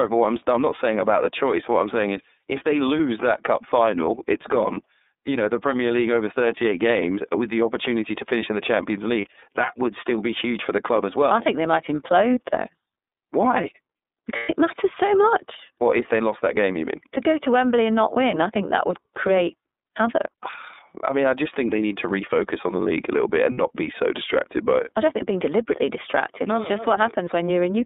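From start to finish the speech is narrow and slightly rough, with a faintly synthetic edge and nothing audible below about 250 Hz or above 3.7 kHz. This is the iLBC codec at work. It codes each frame's excitation independently, and the plainly audible coarseness fits its 13.33 kbps mode with 30 ms frames. Its narrowband telephone line discards the upper spectrum entirely.

At 9.21 to 9.26 s, 14.36 to 14.55 s and 23.51 to 23.58 s, the sound briefly smears into a held, slightly buzzy, breathy tone before snapping back to normal. These are lost iLBC frames. The decoder fills each gap by repeating the last pitch cycle mixed with noise. The first gap fits a single 30 ms frame, the third about 60 ms, and the second, the longest at about 120 ms, spans four frames. Clarity returns almost immediately after each one because every frame decodes on its own.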